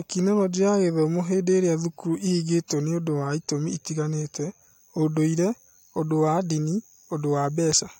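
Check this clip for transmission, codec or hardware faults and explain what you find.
No faults found.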